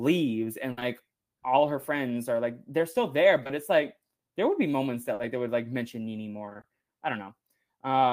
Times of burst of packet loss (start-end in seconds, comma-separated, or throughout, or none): 0.71-0.79, 5.13-5.21